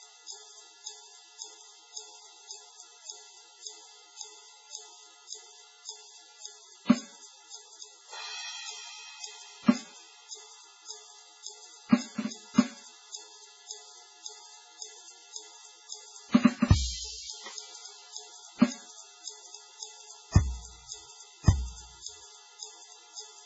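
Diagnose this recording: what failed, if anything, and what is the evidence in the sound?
The codec stage is the culprit, most likely heavy MP3 compression across the whole piece of music. Nothing survives above 7.7 kHz, and what's left swirls and warbles as weak frequency lines blink on and off between frames, which fits a starved bitrate around 16 kbps.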